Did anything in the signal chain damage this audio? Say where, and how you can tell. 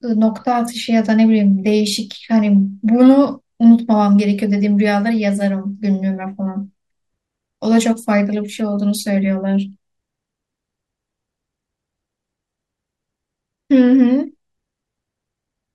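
No, nothing in the signal chain has audibly damaged this speech recording. Listening closely, I can't hear anything that would point to trouble at any stage between capture and playback.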